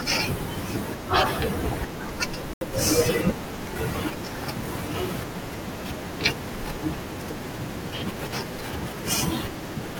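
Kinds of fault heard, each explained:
Bluetooth stall: From 2.53 to 2.61 s the speech drops to complete silence for about 77 ms and then resumes, most likely because radio interference delayed the wireless packets until the headphones' buffer ran empty and playback paused. Unlike a packet-loss dropout masked by concealment, nothing fills the gap: no smeared or repeated sound, no crackle or buzz. The speech simply halts and restarts.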